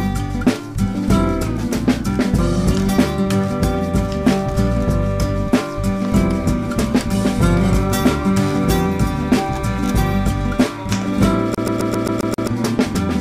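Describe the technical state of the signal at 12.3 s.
At 12.3 s the signal is caught in a CD stuck on one turn, a skipping-disc loop running from 11.55 s to 12.47 s. A scratch keeps knocking the laser back one track at the same point of each rotation, so a 133 ms slice of audio is replayed seven times in succession, each jump marked by a brief mute. The result is a rapid, evenly spaced mechanical stutter.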